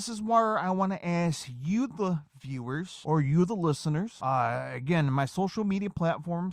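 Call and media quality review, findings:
No faults found in the speech clip. Nothing to raise against any component.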